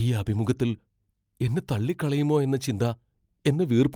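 No technical faults are audible.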